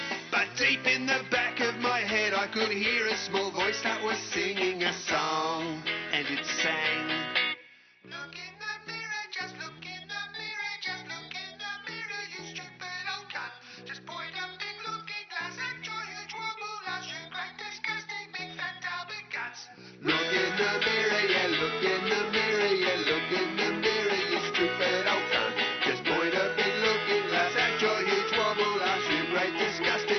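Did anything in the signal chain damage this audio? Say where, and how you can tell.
No, nothing along the chain seems to have left a mark here, so there's no stage to point to and the sound can simply be taken as it is.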